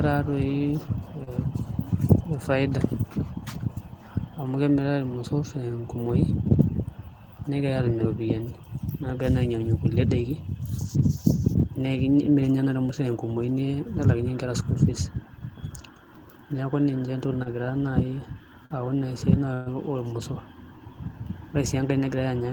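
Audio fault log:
1.23 s, 17.42 s, 18.66 s: short concealed packet loss, about 40 ms missing each time; the receiver extended the preceding sound, leaving a brief smear or wobble.
19.54 to 19.69 s: burst of packet loss, about 120 ms gone; the last sound is stretched and faded into a held buzz or hiss before the speech resumes further on.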